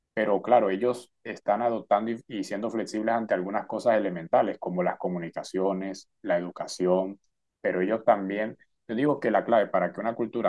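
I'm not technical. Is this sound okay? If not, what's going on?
Yes, it's fine: nothing in this recording sounds broken or glitchy, so there's nothing to worry about.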